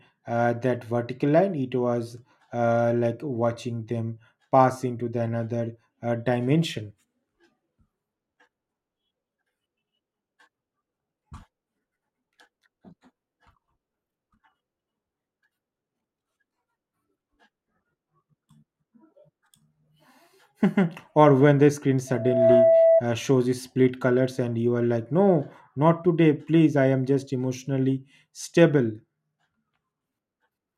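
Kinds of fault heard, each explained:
Loudspeaker feedback squeal: the microphone picks up its own loudspeaker and the loop runs away at 658 Hz, so a pure tone swells over about 0.4 s to a few dB above the speech, from 22.07 to 23.03 s. A spectrogram shows one bright horizontal line; the waveform shows a growing sinusoidal envelope.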